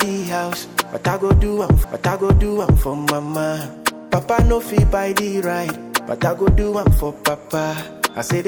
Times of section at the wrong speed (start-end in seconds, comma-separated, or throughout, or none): none